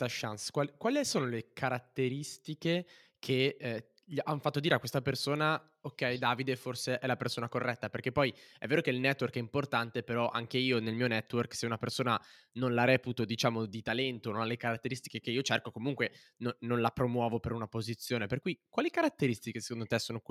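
The speech recording carries no audible technical fault at any point, with the signal holding steady and continuous throughout.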